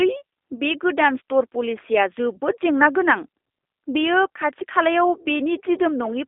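Speech, heard through a G.729 codec for its whole length. Nothing survives above 3.7 kHz, and the line band runs from 300 Hz to 3.6 kHz. The damage is plainly audible: a rough, synthetic edge from rebuilding each frame with a vocal tract model, which fits an 8 kbit/s G.729A coder.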